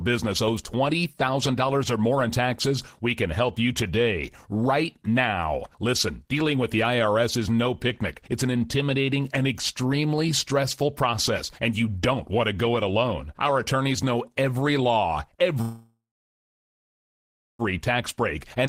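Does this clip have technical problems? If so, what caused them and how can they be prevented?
Yes. From 15.61 to 17.62 s there is a call audio freeze. The last sound is stretched into a fading tail that falls to silence for about 1.6 s, likely because delayed packets drained the jitter buffer. Unlike a skip, speech resumes where it stopped and nothing is lost. More jitter-buffer headroom and a steadier network path prevent this.

At 18.66 to 18.69 s the audio does a skip ahead. After a 14 ms join, roughly a second of speech is gone, dropped while later audio was already waiting. A freeze adds a gap, but this removes content with no pause. Gradual time-scaled catch-up, rather than dropping buffered audio, prevents it.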